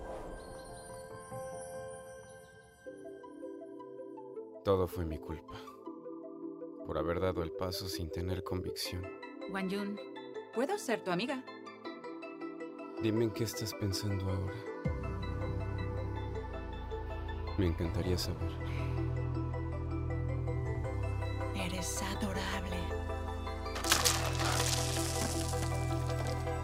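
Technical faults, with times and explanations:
Nothing stood out as a technical problem on listening.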